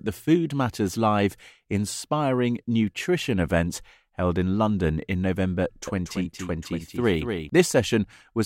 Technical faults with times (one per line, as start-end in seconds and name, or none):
5.87-7.49 doubled audio track